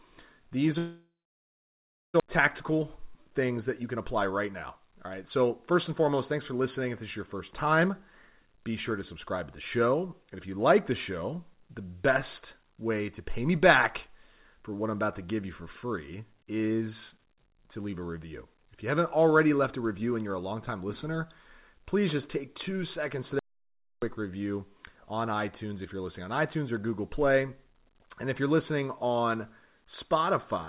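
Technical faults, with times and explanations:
0.78–2.22 s, long network dropout. About 1.4 s of sound is filled in. The last sound carries on briefly as a fading buzz or hiss, then about 1.04 s of silence follows. The audio returns with roughly a second missing. Packets likely stopped arriving, so the receiver concealed, then gave up.
2.44–8.53 s, jitter buffer speed-up. The speech runs about 6% fast at the same pitch and sounds hurried, up to "be sure to subscribe". The receiver cut short pitch-period pieces again and again, roughly 0.4 s in all, to shed delay left by the dropout.
23.39–24.02 s, audio dropout to silence. Between "just take two seconds" and "review on", the sound stops dead for about 0.63 s. The gap is silent with no room tone. Speech resumes mid-flow. The input was likely lost while the recorder kept writing silence.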